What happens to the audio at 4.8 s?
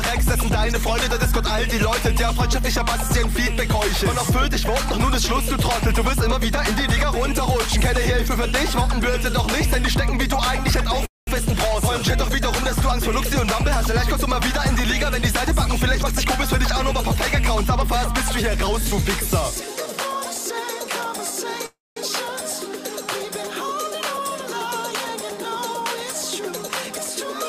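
Nothing goes wrong at 4.8 s; the audio carries straight through that moment without any break, click or other fault.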